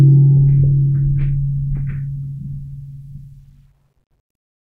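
No faults to report: the music runs without audible technical problems at any point.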